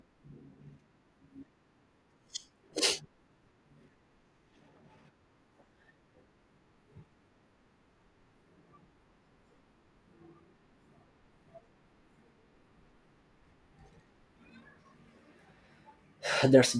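Speech recording with no technical faults to report.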